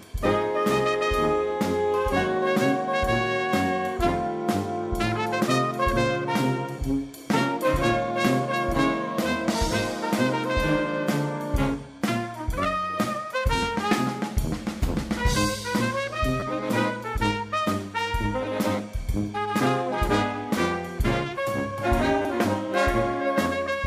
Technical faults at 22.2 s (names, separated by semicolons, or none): repeated buffer